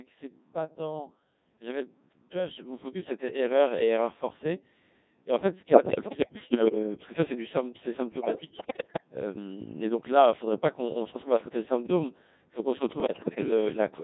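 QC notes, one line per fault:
Throughout, Codec 2 vocoder: the speech is heavily damaged, with a robotic, buzzy character. The decoder rebuilds the voice from sine waves driven only by pitch, voicing, energy and a coarse spectral envelope, so the original waveform is gone. The thin, synthetic quality points to a very low-rate mode, around 1.6 kbit/s, where little spectral detail survives.
5.72–6.75 s, 8.12–9.03 s and 13.00–13.51 s, bit errors on digital voice radio: in these three bursts the synthetic voice jumps in pitch, level and tone colour and breaks into bleeps, warbles and garbled robotic sound. Flipped bits corrupt the parameters that set each whole frame, so every error hits a full frame at once. The error rate is about 10 percent in the first burst, about 15 percent in the second, which is the worst, and about 7 percent in the third.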